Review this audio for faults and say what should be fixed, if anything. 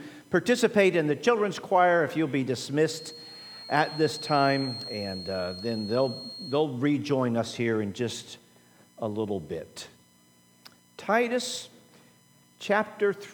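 A loudspeaker-to-microphone loop likely sat just at the edge of feedback from 2.84 to 6.65 s, producing a thin, slowly swelling and fading 4.3 kHz feedback whistle about 15 dB below the sound. To prevent it, lower monitor gain or move the microphone off the loudspeaker's axis, and notch out 4.3 kHz.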